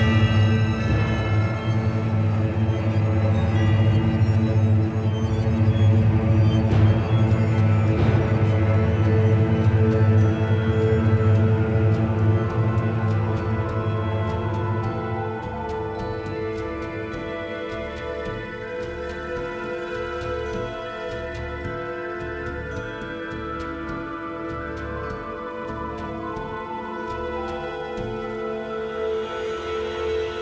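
Nothing here stands out as a fault: the audio comes through a call connection, and the way it tops out around 8 kHz fits a wideband codec like G.722 at 64 kbps doing its normal job.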